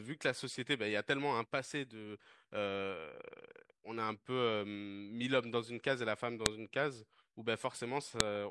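A speech recording with a file header played as audio: sharp, loud clicks at 6.46 s and 8.20 s. Each marks where a separate WAV piece was joined on with its header left in, so those header bytes play back as samples regardless of the speech underneath.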